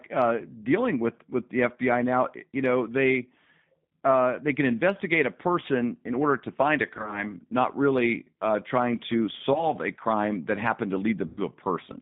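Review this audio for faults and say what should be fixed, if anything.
The whole clip carries G.729 codec damage: the sound is confined to roughly 150 Hz to 3.7 kHz, and it has the plainly audible rough, slightly synthetic grain of a coder that rebuilds speech from a vocal tract filter, a pitch predictor and a few pulses per frame. That fits G.729A at 8 kbit/s. Unlike simple low-pass filtering, the texture itself is altered, not just the bandwidth. Carrying the call on a wideband codec would prevent this.

VoIP packet loss concealed by the speech codec occurs three times. From 6.97 to 7.24 s, just after "order to find a", brief gaps scattered over about 140 ms are bridged by stretched sound, which points to several short losses. Around 9.54 to 9.68 s, just before "a crime that", a single very short dropout leaves a brief smear. From 11.27 to 11.40 s, a longer loss of about 100 ms becomes a fading sound. 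Unlike clean dropouts or clicks, the gaps are filled with the decoder's extrapolation, and the sound stays weak for a moment after each one. A jitter buffer with forward error correction would prevent this.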